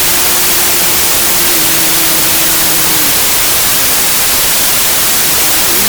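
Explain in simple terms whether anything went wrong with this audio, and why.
Wrong sample width, throughout the clip: audio stored with three bytes per sample, which fits packed 24-bit, was read four bytes at a time. Bytes from neighbouring samples got mixed, so loud hiss buries the sound, which also plays about 1.33 times too fast and high.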